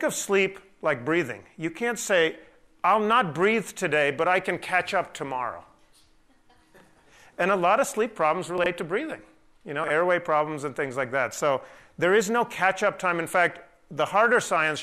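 At 8.58 to 8.66 s a 20 ms chunk plays three chunks late, and at 9.84 to 9.90 s another plays two chunks late. This is chunks out of order: a delayed block is slotted in after material that should follow it, leaving three hard joins and a brief jumbled stretch. Unlike a dropout, nothing is missing or silent. The same audio is present but shuffled.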